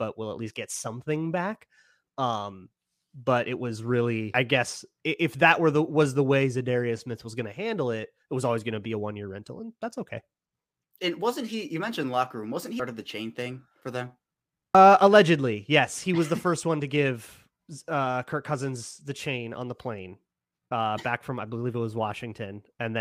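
At 4.34, 12.8 and 14.75 s the speech gets brief glitches, damaged data in the compressed stream, where the decoder misreads corrupted frames and loses sync briefly.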